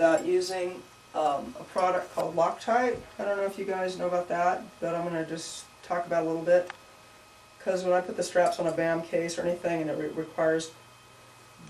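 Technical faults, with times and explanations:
Throughout: MP2 compression, dull and gurgling with granular grit as upper sub-bands switch off, likely from MPEG Layer II at around 80 kbps, unlike MP3's swirly pre-echo.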